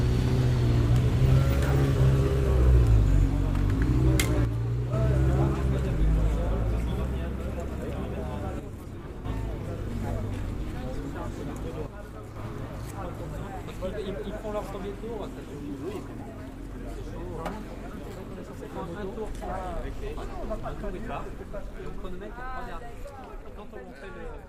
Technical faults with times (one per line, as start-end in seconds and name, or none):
4.45-4.93 one channel drops out
8.60-9.25 one channel drops out
11.86-12.36 one channel drops out